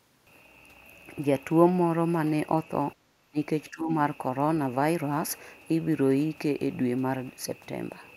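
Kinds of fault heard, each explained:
Speech suppressed in double talk, at 3.09 to 3.37 s and again at 3.7 to 3.9 s: the speech level dips abruptly, by roughly 20 dB in the first stretch and somewhat less in the second, then recovers. The likely cause is an echo canceller meeting simultaneous talk from the far end, failing to tell the near talker apart from loudspeaker echo, and pulling down everything it picked up until the overlap ended.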